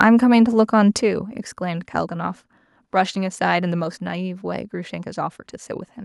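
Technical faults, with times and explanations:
0.00–0.03 s, microphone overload: The opening instant of the speech carries a brief harsh, crackly edge, a flattened buzz rather than a clean onset. The peaks are pushed about 4 dB past full scale, and a small share of the samples are squared off at the ceiling. This is likely because the input volume was set too high for the converter, so the waveform tops are sliced off and the added harmonics produce that gritty texture.
1.02 s and 3.84 s, microphone volume stepped down: At each of these moments the speech and the background behind it abruptly become quieter together, first by about 5 dB and then by a further 2 dB, with no fade between levels. Because everything drops at once, the change sounds like a hand turning a fader rather than the talker backing off. The likely cause is call software that detected the overloaded input and cut the microphone's gain in single steps.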